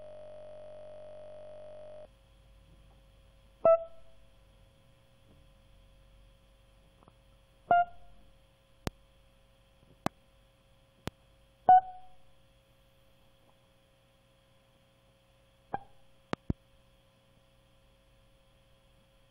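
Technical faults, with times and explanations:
0.00–2.05 s, system hang loop: already under way at the start. A 21.33 ms slice of music repeats exactly, giving a steady 46.9 Hz buzz. This fits a stalled 1024-sample ring buffer.
8.87–8.90, 10.06–10.09, 11.08–11.10 and 16.33–16.52 s, loud pop: sharp single pops sit over the continuing music, roughly 20 to 25 dB above it. The last is a double pop. These are likely voltage spikes from a switch, static or driver glitch.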